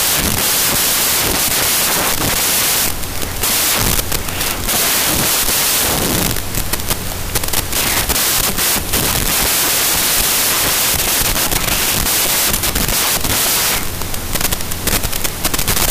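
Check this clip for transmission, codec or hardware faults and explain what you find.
One fault runs through the whole clip: wrong sample width. The 16-bit data is read as packed 24-bit, so each value straddles mismatched bytes from neighbouring samples. The result is loud noise with the real sound buried inside, playing 1.5 times fast and raised in pitch. A byte-order swap would also be noisy, but it keeps the original speed and pitch.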